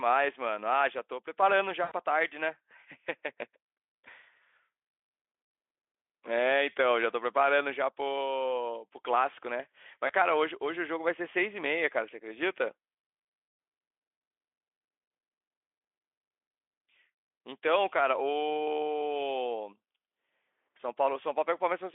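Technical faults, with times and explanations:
1.83–1.92 s, 10.07–10.11 s and 20.77–20.80 s: VoIP packet loss concealed by the speech codec. On this narrowband Speex line, about 80 ms goes missing at the first spot, which fits four 20 ms frames, and a single 20 ms frame at the other two. The decoder keeps extrapolating from its last pitch and filter while turning the gain down, so each gap comes out as a short stretched tone or coloured noise that fades. The sound stays weak or distorted for tens of milliseconds or more just after, since each frame builds on the last.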